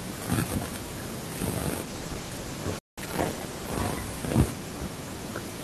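Speech, and from 1.86 s through to the end it's hit by a call bitrate drop. The encoder's budget falls from 64 kbps to 14 kbps, so it has to code the signal much more coarsely and trims away the top end to save bits. You hear the voice turn muffled and rough, and it doesn't recover before the clip ends. The worst stretch, at the lowest rate, lasts about 1.5 s.

On top of that there's a playback stall from 2.79 s to 2.98 s, a gap of about 186 ms where the output simply goes silent in mid-flow. That's most likely the player running dry on buffered data or its audio thread getting blocked, so nothing reaches the output until it picks up again.

Right after it, from 2.98 s to 3.72 s, comes catch-up at higher speed. The player works through its backlog by resampling at 1.25x, so the talking rushes and the pitch climbs by roughly four semitones, giving a brief chipmunk quality. All of this happens at the degraded bitrate.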